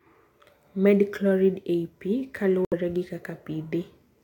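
At 2.65 s, right after "ei pi", the speech cuts to dead silence for about 90 ms, until 2.74 s. This is a corrupt frame muted fault. Damaged compressed frames were rejected by the decoder and replaced with silence, and the length of the hole fits roughly three codec frames. The onset is abrupt rather than faded, and nothing is filled in or smeared across the gap. The speech then resumes on schedule with no lost time, which separates this fault from a dropout that shifts timing.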